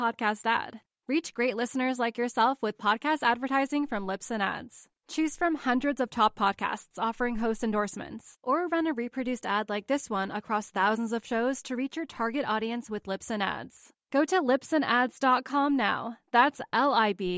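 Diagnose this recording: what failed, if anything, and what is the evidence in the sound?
Nothing in the speech recording stood out as a failure on listening, so there is no stage to point to and no evidence of a fault to report.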